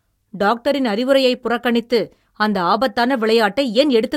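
From 0.42 to 4.10 s, faint regular clock slip clicks tick roughly every 0.4 s. This is likely from unsynchronised clocks drifting about 50 ppm, which drops or repeats single samples. These show as thin vertical lines on a spectrogram and tiny waveform steps.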